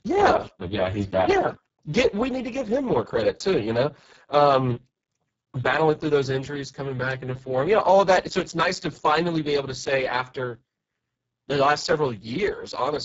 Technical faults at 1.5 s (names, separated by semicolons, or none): Speex codec